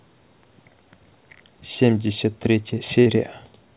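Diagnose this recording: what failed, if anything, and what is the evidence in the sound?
A burst of packet loss at the network stage runs from 3.0 to about 3.08 s. For about 57 ms the receiver's concealment repeats the last received sound as a held, fading buzz or hiss. The audio then resumes about 60 ms further on, so that stretch is missing. On a spectrogram the harmonics flatten into horizontal bands that thin out before an abrupt jump to new content. All of it sits below the 4 kHz ceiling of the narrowband call codec.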